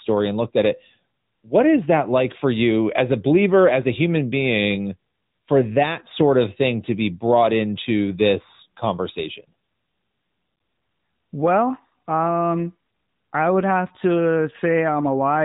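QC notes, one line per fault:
Throughout: AMR narrowband mobile codec. Nothing passes above 3.8 kHz. Its pulse-driven vocal-tract model makes the speech plainly buzzy and synthetic, which fits a rate near 10.2 kbps.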